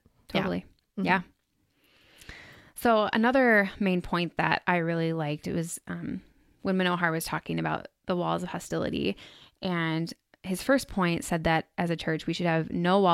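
No technical faults are audible.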